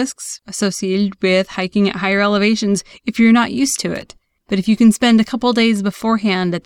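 A short, irregular burst of crackle and scratching cuts into the speech from 3.95 to 4.03 s, lasting about 80 ms. This is loose connector crackle: a worn or dirty contact momentarily breaking and remaking the connection, chopping the signal into rough fragments.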